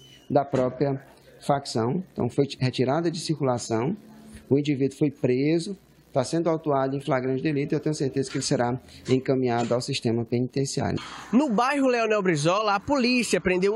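No technical faults can be heard anywhere in the recording, and the signal holds steady throughout.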